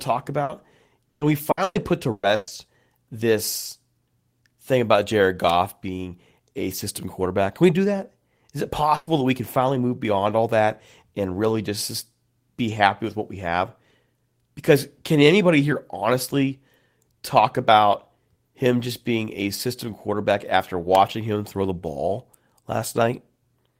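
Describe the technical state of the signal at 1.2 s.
At 1.2 s the speech is inside a stretch of repeated packet loss (robotic sound) running from 1.09 to 2.50 s. Five gaps, the longest 120 ms, are patched by stretching the preceding sound, covering about 38% of the span. This gives choppy audio with pieces missing. On a spectrogram the patches appear as smeared, repeated bands, and the waveform shows looped, self-similar segments.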